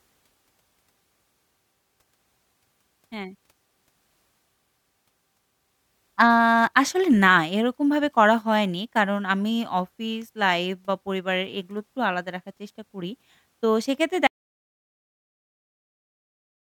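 An audio dropout to silence begins at 14.27 s and runs to the end of the clip, about 2.5 s. The speech cuts off mid-flow into dead silence with no room tone, likely because the input was lost while recording continued writing silence.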